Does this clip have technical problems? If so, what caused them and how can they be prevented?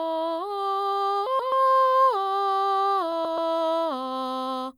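Yes. Frames out of order at 1.27–1.52 s and 3.12–3.38 s: two neighbouring 128 ms runs play swapped, giving a garbled flutter. Prevent it by having the receiver reorder packets by sequence number in a jitter buffer before decoding.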